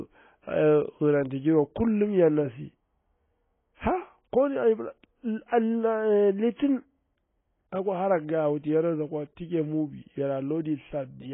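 A speech clip with heavy AAC compression damage the whole way through. Nothing survives above 3.8 kHz, so it sounds dull and muffled, with a smeared, warbly edge on sibilants. That much band-limiting points to a low bitrate, likely AAC-LC at around 16 kbps.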